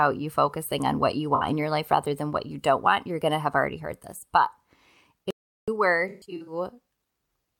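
Between "focusing on what you" and "in your life rather", 1.35 to 1.43 s, the speech smears into a brief noisy, phasey blur: AAC frame loss with concealment. About 64 ms went missing, which fits three lost frames, and the decoder patched the gap from the last good spectrum. At 5.31 s the speech cuts to dead digital silence, with no room tone, for about 373 ms until 5.68 s. This audio dropout to silence was likely caused by the input briefly disconnecting or muting while the recorder kept writing silence. From 6.08 to 6.53 s the smeared, noisy texture returns in broken patches as AAC frame loss hits again: about 277 ms of frames lost, scattered across 384 ms. The longest run lasts roughly 150 ms.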